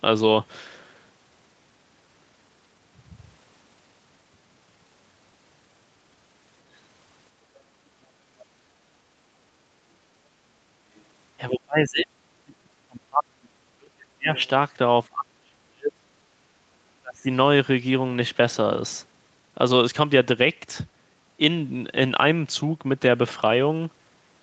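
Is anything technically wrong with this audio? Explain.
Yes. There are two echo-related faults in this speech.

Other side's voice leaking through: brief scraps of a second voice at 8.39–8.46 s, 10.96–11.01 s and 14.36–14.48 s, roughly 25 to 40 dB below the talker. This is likely loudspeaker pickup that the echo canceller failed to remove fully, heard as faint fragments.

Speech suppressed in double talk: the talker's level drops, by up to about 40 dB, across 11.5–14.36 s, 15.08–16.1 s and 17.01–17.27 s. This is likely the echo canceller turning everything down while both sides spoke at once, so the voice dips.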